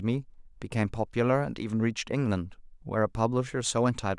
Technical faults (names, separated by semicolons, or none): none